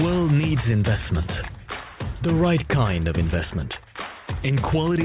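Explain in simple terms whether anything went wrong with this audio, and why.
Nothing went wrong with this audio that a careful listener would pick up on. It holds together steadily, with no sudden breaks, jumps or odd changes anywhere along the way.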